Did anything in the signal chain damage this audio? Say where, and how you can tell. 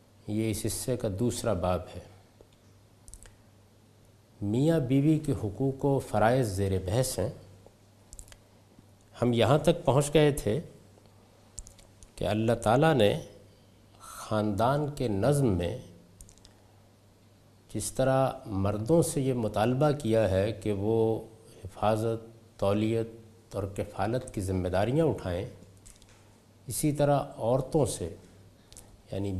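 No, nothing in the signal chain damaged this audio, so there is no stage to point to.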